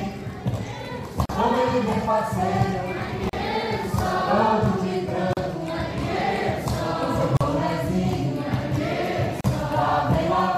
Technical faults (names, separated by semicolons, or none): gap at a join of encoded pieces